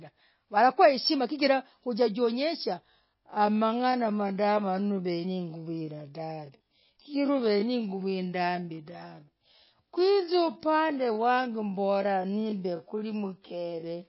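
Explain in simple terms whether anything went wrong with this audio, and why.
Two things went wrong.

The whole recording has MP3 compression damage. The encoder was likely short of data. It had to throw away the quieter details. The leftover sound has a watery, swirly quality, and the s sounds turn metallic. This damage is plainly audible from start to finish.

From 2.82 s, just after "walakuwa heshima chigirah ujajionyesha", there is a time-stretched section that runs to the very end. The pace suddenly drops to about 0.58 times normal speed, yet the pitch stays the same. This is likely software lengthening the audio by repeating tiny slices of it. That is why the slowed speech drags.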